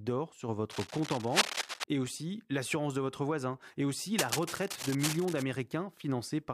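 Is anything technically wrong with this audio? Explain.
Yes. Cable scratch noise appears twice in the speech. From 0.71 to 1.84 s, just before "et aussi l'assurance de", dense, uneven scratching and rustling sits about as loud as the speech itself. From 4.17 to 5.43 s, right after "votre voisin et aussi", similar rustling returns, somewhat quieter. The likely cause is a worn cable, connector or control being moved, its contact resistance jumping rapidly and injecting bursts of noise into the signal.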